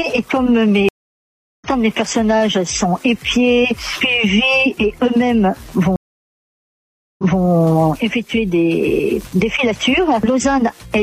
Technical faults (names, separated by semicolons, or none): stream reconnect